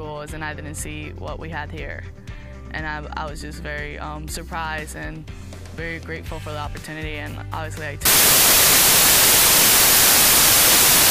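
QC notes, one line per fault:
8.05 to 11.11 s, samples built from the wrong bytes: from here to the end the audio collapses into loud, harsh broadband noise. The reader is misassembling each sample's bytes, so the jittery low bits land in the high positions.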